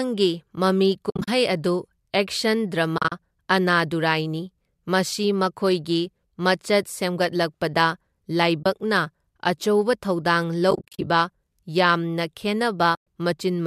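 AAC frame loss with muting leaves soft-edged gaps in the speech at 1.10–1.28 s, 2.98–3.12 s, 8.63–8.66 s, 10.71–11.07 s and 12.95–12.99 s. Missing frames of about 10 ms, likely from low-delay AAC, are decoded as silence, and the overlapping windows fade the sound out and back in.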